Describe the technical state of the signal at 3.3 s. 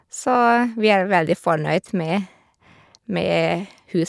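At 3.3 s the signal is intact, with no audible fault at that point.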